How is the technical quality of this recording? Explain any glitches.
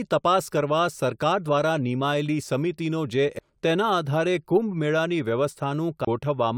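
The speech recording has two CD skips, at 3.39 s and from 6.05 to 6.07 s. Each time a jolt or disc flaw knocks the laser onto another turn of the spiral, so the player mutes briefly, ticks, and resumes from a different point. The first mute lasts only a few milliseconds and the second about 20 ms. On a waveform, each skip shows as a short flat gap with a discontinuity on either side. On a spectrogram, each is a thin vertical click line where the speech pattern jumps abruptly.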